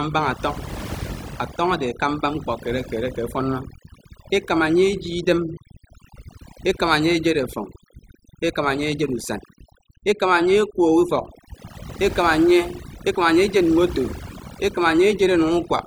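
Overdone noise removal runs through the whole speech clip. The noise reducer is set so hard that bands near its noise estimate get pushed down or switched off, dragging quieter parts of the voice along. So the background drops and breaks up into twinkly specks.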